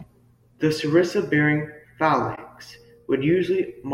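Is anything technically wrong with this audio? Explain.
Yes. From 2.35 to 2.38 s a corrupt frame was decoded: flipped bits in roughly one compressed frame were played anyway, so misread gains and codes put energy at the wrong frequencies. It is heard as a brief chirp-like blip peaking around -25 dBFS over the speech.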